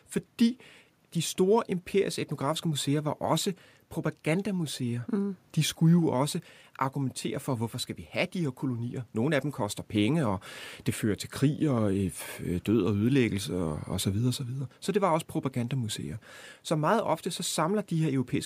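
No technical faults are audible.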